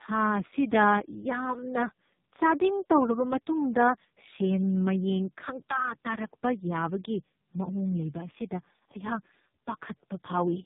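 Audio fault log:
throughout, tandem speech coding: three speech coders in series, each re-encoding the previous one's damage, leave the speech rough, warbly and muffled, with nothing above 3.7 kHz.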